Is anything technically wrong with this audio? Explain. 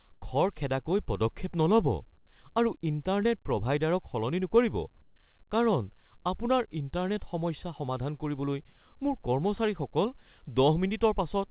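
Yes. Comfort noise in place of the background appears from 0.14 to 0.22 s and from 5.02 to 5.16 s, in a call path whose audio stops at 4 kHz, which fits a narrowband G.711-type codec. The sender's voice detector likely paused transmission, and the receiver filled both gaps with synthetic noise. The quiet background, about 37 and 41 dB below the loud parts, becomes a smooth, featureless hiss, about 2 dB louder in the first gap and about 3 dB quieter in the second.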